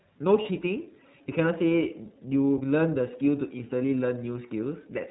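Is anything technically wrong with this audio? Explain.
Yes. The whole clip has passed through the iLBC codec, a narrowband VoIP codec that codes each frame's excitation independently. Nothing above 4 kHz survives, so a spectrogram shows a flat ceiling there. The speech sounds plainly rough and synthetic, which fits the 30 ms, roughly 13 kbps mode.

At 0.42 s there is a lost iLBC frame lasting about 30 ms, which points to one dropped packet. The decoder filled the gap by repeating the last pitch cycle mixed with noise, so it sounds like a brief buzzy, held vowel. A spectrogram shows frozen, smeared harmonics, and the speech recovers immediately afterwards.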